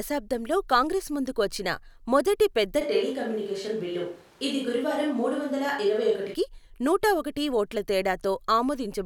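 A switch to a distant microphone runs from 2.82 s to 6.33 s, starting just after "మొదటి పెద్ద" and ending just before "నూట ఒకటి ఓట్ల". The speech abruptly turns roomy and hollow, losing its bass body, while its loudness stays about the same. Room noise rises to roughly 30 dB below the speech. The likely cause is that the close microphone's signal dropped out and a farther microphone covered those seconds, before the sound snaps back to the close pickup.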